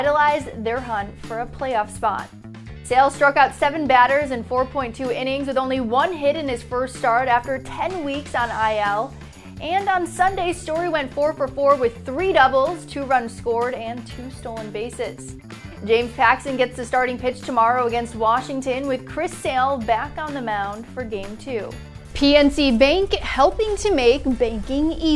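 No technical faults can be heard anywhere in the clip. The audio runs without any dropout, glitch or interruption along the way.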